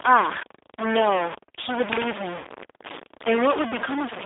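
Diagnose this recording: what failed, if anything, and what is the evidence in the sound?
A data bit in the converter or sample-format path is likely stuck at a fixed value. A distortion rides on the speech for the whole clip, and the quiet gaps between phrases are filled with a noise floor instead of silence. When one bit is held constant, roughly half of all sample values are pushed off by that bit's weight, and small signals near zero are hit hardest. That is why the pauses turn noisy.

The call went through a G.729 codec stage (G.729A), and the damage from it is plainly audible throughout. The audio is confined to a telephone band of about 300 Hz to 3.7 kHz, with nothing above that. The speech sounds rough and slightly synthetic, which points to an 8 kbit/s codec. G.729 does not send the waveform itself. It rebuilds speech from a vocal-tract filter, a pitch predictor and a few pulses in each frame, so fine detail is lost and replaced by an approximation.

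At 2.38 to 2.47 s the network dropped about 60 ms of audio, which fits two lost packets, and the result is VoIP packet loss concealed by the speech codec. During that stretch the decoder had no new data. It kept extending its last pitch and filter state at falling gain, so the sound smears and fades. Because each frame builds on the previous one, the speech stays weak or distorted briefly after the packets resume.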